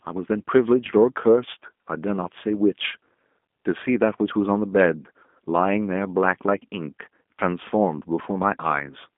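From start to finish the speech carries G.729 codec damage, plainly audible as a slightly rough, synthetic edge, which fits an 8 kbit/s codec rebuilding each frame from a filter and a few pulses. A spectrogram shows everything confined to a 200 Hz to 3.5 kHz band, blank above 3.6 kHz.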